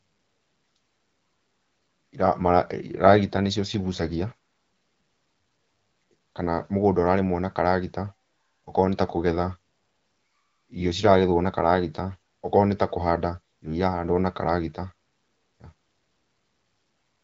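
No technical faults can be heard in this speech.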